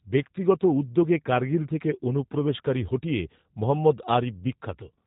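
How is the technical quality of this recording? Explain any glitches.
The recording carries plainly audible codec damage from start to finish. Throughout the speech, G.729 coding is evident: the codec rebuilds each frame from a vocal tract filter, a pitch predictor and a few pulses, which fits 8 kbit/s, leaving a rough, synthetic edge. A spectrogram shows nothing above 3.8 kHz, with smeared harmonic detail.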